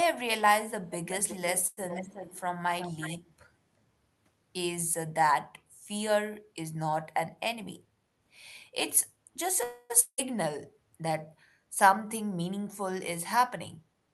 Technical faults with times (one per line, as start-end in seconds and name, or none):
1.10-2.41 echo leak
1.67-1.79 short stall from a late packet
2.79-3.19 echo leak
7.55-8.26 jitter buffer speed-up
9.63-9.92 call audio freeze
10.00-10.31 long network dropout
13.37-14.08 jitter buffer speed-up